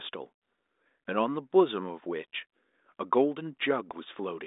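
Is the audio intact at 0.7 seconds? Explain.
Yes, the audio is intact at 0.7 s.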